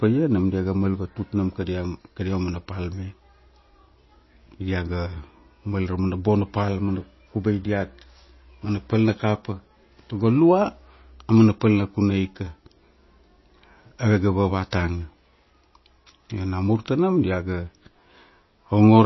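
Speech in which the treble stops dead at about 5.8 kHz for the whole clip, with plainly audible watery, swirling artefacts. That points to MP3 compression, likely at a low bitrate near 24 kbps. The shifting swirl, not just the missing top, separates it from plain low-pass filtering.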